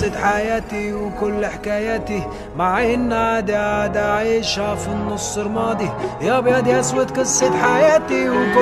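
No technical faults can be heard at any point in the clip.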